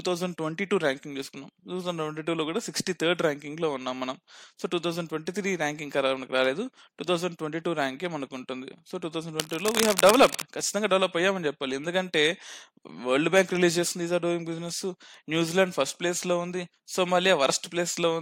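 A speech recording with a burst of cable scratch noise from 9.40 to 10.43 s: dense, ragged scratching and rustling laid over the speech, only slightly quieter than the voice. It is likely caused by a worn cable or connector shifting, making its contact resistance flicker.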